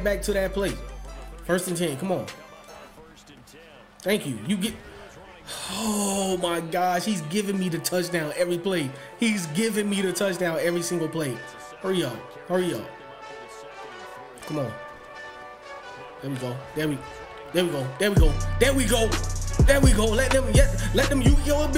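No technical faults can be heard anywhere in this audio, so there is nothing to describe in time order.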